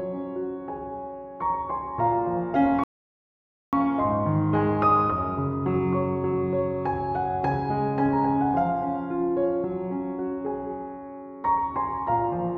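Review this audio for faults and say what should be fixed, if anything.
Rebuffering stall, 2.84 to 3.73 s: the player's buffer ran dry, so the sound falls silent, then resumes exactly where it stopped, adding 0.89 s. A larger playback buffer, or switching to a lower bitrate when the download falls behind, would keep enough audio ahead to prevent it.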